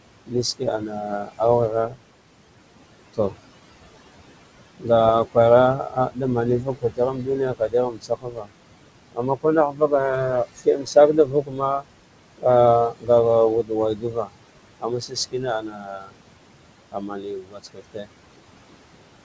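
Noise suppressor artifacts run through the whole clip. The suppressor treats the steady room noise, sitting about 14 dB below the speech, as something to remove band by band and frame by frame, pulling it down by about 21 dB. Between phrases the background sinks away, and under the voice it comes back up.

Speech cut by the noise suppressor occurs from 0.26 to 2.0 s, 2.99 to 3.36 s, 4.79 to 8.51 s, 9.12 to 9.92 s, 10.45 to 13.09 s, 13.63 to 16.2 s and 16.92 to 18.1 s. In each stretch the suppressor mistakes quieter parts of the speech for noise and turns them down with the background, by about 20 to 22 dB at the deepest. Soft consonants and word endings come out swallowed or faint. The affected portions add up to under a second in four of the spans and about one to one and a half seconds in the other three, from 4.79 to 8.51 s, 13.63 to 16.2 s and 16.92 to 18.1 s. The call path stops at 8 kHz, which fits a wideband codec such as G.722.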